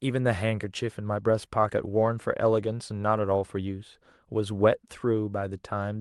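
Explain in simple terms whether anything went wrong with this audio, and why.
Nothing went wrong; it's ordinary speech over a call.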